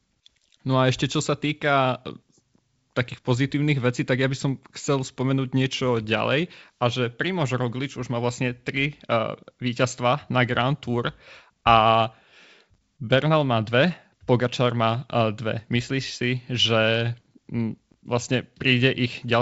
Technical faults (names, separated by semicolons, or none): none